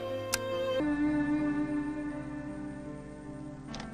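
A section at the wrong speed runs from 0.8 s to the end of the clip. At that point the sound abruptly slows to 0.564 times its original rate, and because speed and pitch are tied together, everything drops by about ten semitones at the same moment, turning deep, heavy and dragged out. The likely cause is that this stretch was played back or fitted against the wrong clock, so the samples came out at little more than half their intended rate.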